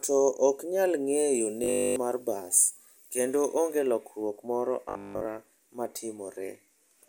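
From 1.34 to 3.79 s, between "ok nyal" and "lokruok moro", the speech turns thin, bright and hissy. This is pre-emphasis left on: the treble lift, consistent with the CD 50/15 µs curve, was never undone, leaving about 8 dB more at 10 kHz than at 1 kHz. It is a steady tonal tilt with no buzz or stutter.

Inside that stretch, from 1.64 to 1.96 s, the speech becomes a rigid metallic buzz at 50 Hz, and a second patch follows from 4.89 to 5.25 s, just after "lokruok moro". This robotic sound is likely caused by repeated short buffers, a 20 ms slice replayed over all of the first patch and most of the second. Unlike mains hum, the buzz takes the place of the speech and follows it only roughly.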